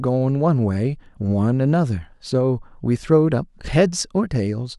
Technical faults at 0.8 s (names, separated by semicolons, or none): none